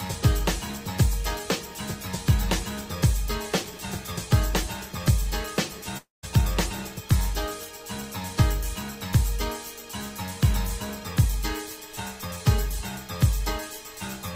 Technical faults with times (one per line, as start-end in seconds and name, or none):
5.97-6.25 long network dropout